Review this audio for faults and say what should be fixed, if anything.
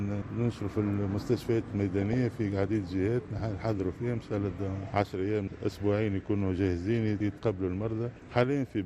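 The whole clip sounds dull and gurgly, with a granular edge on everything. The upper range thins out and seems to flicker. That points to MP2 compression, likely at a rate around 80 kbps. Layer II splits the signal into 32 sub-bands and shares out a fixed bit budget. At this rate the top bands get switched off, and the rest are quantised coarsely. The damage is plainly audible. Encode at a higher bitrate, or use a more efficient codec, to prevent this.

From 1.99 to 2.14 s there is a short burst of DAB burbling. It adds a brief burbling distortion over the audio. Weak reception let bit errors slip past the error correction, at a rate of a small fraction of a percent. The corrupted samples put short blips of noise into single sub-bands. Eleven frames were hit. Better antenna placement or a stronger signal would prevent this.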